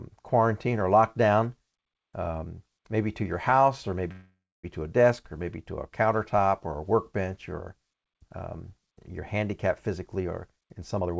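At 4.12 s, right after "to your house or", the speech stalls for about 0.52 s in a call audio freeze, likely from delayed packets emptying the jitter buffer. The last sound smears on and fades, going silent for about 0.27 s. It then resumes with "to a desk or" and nothing is skipped, which distinguishes it from a dropout.

From 9.99 s to 11.17 s, following "or um you're handicapped", a jitter buffer speed-up trims short pitch-period slices to drain excess delay. The speech runs at about 131% speed and roughly 0.4 s is removed, but the pitch stays where it was. A simple fast playback would raise the pitch as well.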